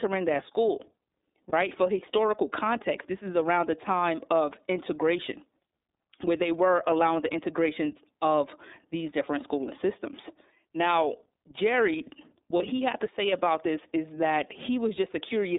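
It's a speech clip coded through the iLBC codec, with the band held to roughly 250 Hz to 3.7 kHz and plainly audible rough, synthetic coding, which fits the 13.33 kbps mode with 30 ms frames. There are also two lost iLBC frames, at 1.49–1.53 s and at 12.56–12.61 s just before "he had to say". In each, about 30 ms is patched with a repeated pitch cycle plus noise, and it recovers right away.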